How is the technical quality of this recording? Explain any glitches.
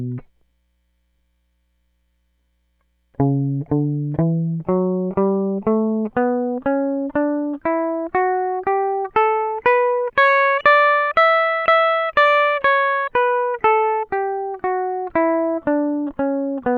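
The music recording has no audible technical problems.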